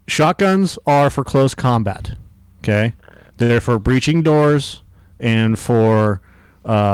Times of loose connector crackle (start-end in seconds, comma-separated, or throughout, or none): none